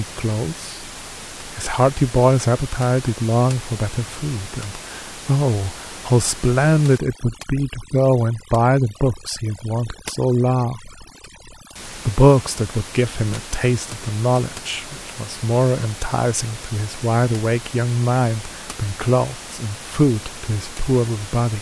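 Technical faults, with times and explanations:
6.98–11.76 s, overdone noise removal: the room noise, sitting about 16 dB under the speech elsewhere, suddenly drops and breaks up into little twinkling specks. That's a noise reducer pushed too hard. Any frequency band that lands close to its idea of the noise gets pulled way down or shut off, so the quieter bits of the voice get stripped out along with the noise.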